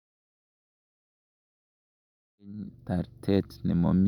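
No technical faults detected in this speech; the level comes up in a smooth, editor-style fade-in from around 2.5 s to 2.96 s.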